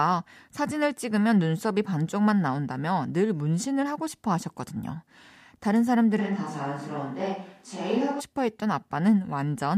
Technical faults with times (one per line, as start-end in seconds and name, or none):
6.20-8.19 switch to a distant microphone